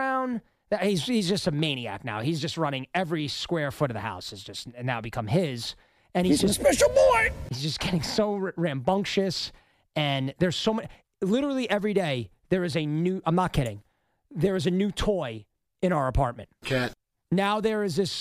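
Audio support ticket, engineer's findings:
No audible fault found on full listening review. Nothing to attribute to any component, so no further action from the audio side.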